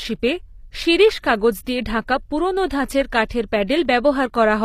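Throughout, the treble sounds synthetic and gritty with nothing above 15.5 kHz, likely HE-AAC compression at a low bitrate, its replicated highs unlike the dulling of a simple lowpass. At 3.29 s and from 3.67 to 3.69 s, pre-echo puts a brief hiss just before attacks. Unlike a click, it smears the onset earlier by about 16 and 22 ms.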